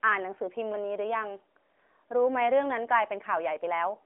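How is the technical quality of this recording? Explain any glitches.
Nothing in this speech recording stands out as a glitch, so there's no problem here that needs explaining.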